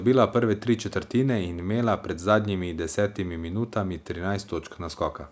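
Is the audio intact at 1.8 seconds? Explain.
Yes, the speech at 1.8 seconds is intact, with nothing there beyond the normal call microphone processing.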